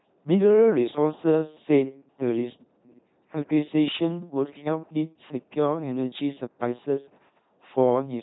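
Throughout the speech, the LPC-10 vocoder effect is heavy. Each moment is resynthesised from an all-pole vocal tract filter driven by either a pulse train or noise, giving a buzzing robotic voice with misplaced hiss and nothing above 3.9 kHz, consistent with 2.4 kbit/s LPC-10.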